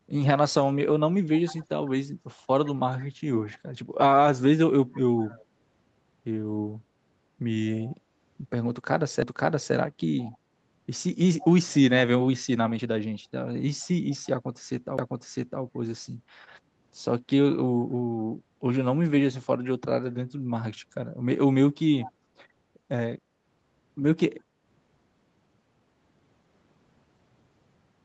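Right at 1.36 to 1.66 s you get the first bit of echo leak: a faint copy of the speech trailing 161 ms behind, sitting about 20 dB down. It comes back at 3.48 to 5.45 s, 7.65 to 7.89 s, 10.19 to 11.74 s, a barely-there scrap at 13.8 s (about 35 dB under), and again at 22.0 to 22.1 s. The far end is likely on a speakerphone whose echo canceller didn't fully scrub its mic pickup, so a delayed ghost gets sent back.

There are two CD skips. At 9.22 s there's a tick with a tiny gap of about 3 ms. At 14.98 s the gap is about 10 ms. Each time the laser jumps to a different turn of the disc's spiral, so the player mutes briefly and picks up somewhere else. That's why you hear a small click and a sudden lurch in the speech, jumping forward or back by one or several disc turns.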